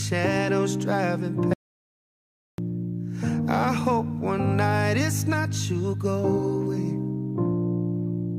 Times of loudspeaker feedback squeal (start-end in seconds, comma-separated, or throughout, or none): none